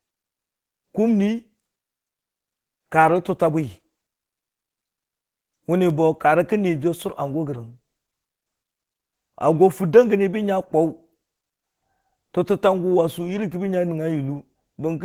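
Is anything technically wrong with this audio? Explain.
Yes. The speech carries plainly audible Opus compression damage throughout: it sounds muffled, hoarse and grainy. The likely cause is Opus in its hybrid speech mode at a rate that fits about 16 kbps, too few bits to render the upper bands cleanly, so they are coarsely filled.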